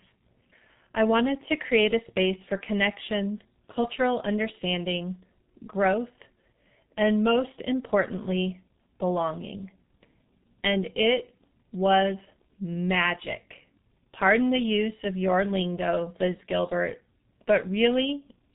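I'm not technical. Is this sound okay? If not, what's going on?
No. The speech passed through a G.723.1 codec, an old internet-phone format that squeezes audio very hard and discards everything above about 3.8 kHz. Throughout the clip, that leaves the speech muffled and hoarse, with consonants smeared and indistinct.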